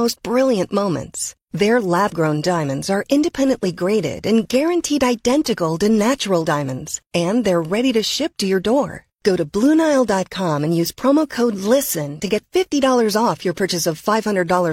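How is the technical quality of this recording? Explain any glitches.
No glitches or technical faults turn up anywhere in the recording; the signal stays stable and intact throughout.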